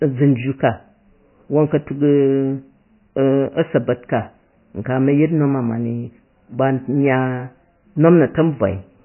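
The speech in this clip sounds muffled and watery from start to finish, with a swirling, underwater quality and metallic chirping on s sounds, while consonant onsets smear rather than snap. Nothing is heard above 3 kHz, a hard treble ceiling. This is likely heavy MP3 compression at a very low bitrate, one that points to something near 18 kbps. Short of bits, the encoder cut the top band and zeroed quieter frequency lines that flicker on and off between frames.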